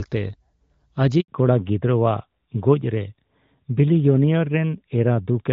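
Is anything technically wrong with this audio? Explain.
Yes, there are two faults, and they're linked. From 1.20 to 1.28 s there's a handover gap: the call switched networks and no speech frames got through for about 80 ms, so the voice dies away within a few tens of milliseconds and sits in silence until the new link starts carrying audio.

Right after that, from 1.28 s to the end, comes a fallback to narrowband. Before the gap you can hear the HD Voice wideband codec, lightly coded, in a way that fits roughly 12.65 kbit/s. After it, everything above 4 kHz is gone, which points to an older narrowband codec at around 12.2 kbit/s. The speech loses its crispness and sounds duller and rougher.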